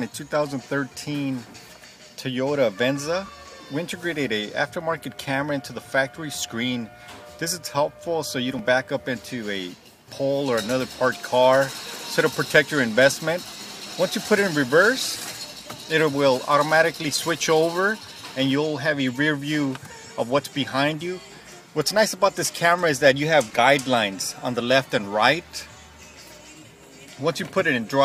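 Around 3.26 to 3.29 s there's a quick garbled blip: chunks out of order. A block of roughly 11.6 ms (which fits a 512-sample buffer at 44.1 kHz) showed up one slot late, so it plays after its neighbour. Nothing goes missing, but there are three hard joins. The same thing happens at 23.50 to 23.55 s, where a block lands three slots late, giving a longer jumbled smear.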